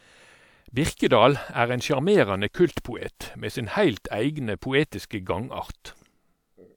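A short recording of speech, and nothing technically wrong can be heard in it. There is no fault here to place in time or trace to a cause.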